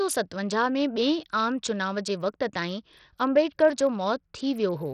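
Throughout, the treble flickers and grit rides on the speech, with nothing above 14.6 kHz. Likely Bluetooth SBC compression, starved of bits, fitting roughly 64 kbps.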